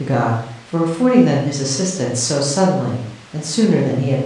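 No technical faults can be heard anywhere in the speech.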